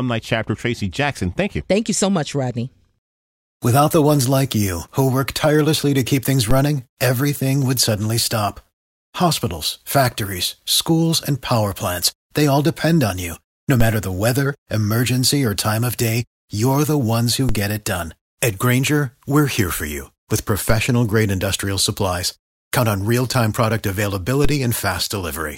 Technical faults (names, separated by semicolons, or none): DC step